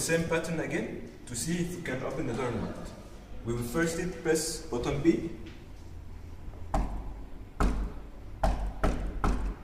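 The audio has two brief lost LE Audio frames, at 3.93 s and 9.15 s. Each is a single missing 7.5 ms frame that the LC3 decoder covers by reusing the previous spectrum with randomised signs, so each spot is a short noisy smear rather than a gap. At 7.57 s there is a jump in the sound, likely a dropped buffer (overrun): a very short stretch, around a millisecond and a half, was overwritten before being read, and the two sides were spliced together. The light lossy compression present leaves only faint traces.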